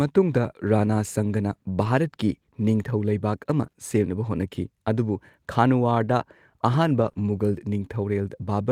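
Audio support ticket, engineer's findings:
Scattered short gaps, 0.51–3.75 s: about three brief ticks and smears in the speech, none much over 20 ms. Jitter buffer concealment extends the prior sound. Spectrogram shows thin smeared columns.

Lost packet rebuilt from error correction, 7.01–7.07 s and 7.17–7.19 s: rougher, noisier frames, no gap. Opus in-band FEC low-bitrate copies, the first fitting two 20 ms packets.

Short concealed packet loss, 7.09–7.13 s and 7.13–7.17 s: back-to-back 20 ms wobbly fills. Decoder PLC continues the last pitch or shaped noise, then blends back.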